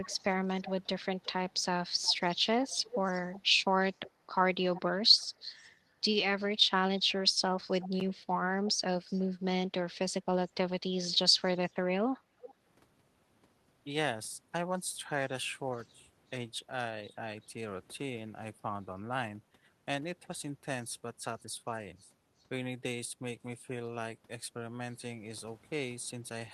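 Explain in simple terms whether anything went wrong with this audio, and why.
Echo leak shows up four times: from 0.03 to 5.71 s, from 7.09 to 8.72 s, and in short scraps at 12.42 to 12.54 s and 15.73 to 15.87 s. A quieter copy of the speech trails the original by about 0.36 to 0.38 s. It is clearest in the opening stretch and barely audible at 15.7 s. The likely cause is a loudspeaker on the far end whose echo canceller let part of the call leak back into its microphone.

Speech suppressed in double talk occurs at 7.35 to 7.72 s, 8.8 to 9.15 s and 10.45 to 11.41 s, overlapping or following the second echo stretch. The voice briefly dips or drops out in short bits, about a tenth of a second or less in each place, with the first dip the deepest. This is likely the echo canceller mistaking the talker for echo while both sides were active, and turning the speech down along with it.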